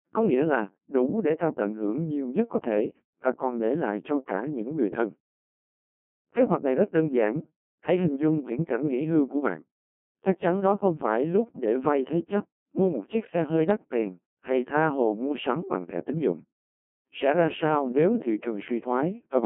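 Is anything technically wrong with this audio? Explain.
Yes. Throughout the speech, a Codec 2 vocoder at a very low rate, which fits about 1.2 kbit/s, discards the waveform and rebuilds it from pitch, voicing and envelope. The result is heavily robotic and buzzy, confined to 150 Hz–3.4 kHz, with nothing above 3.5 kHz.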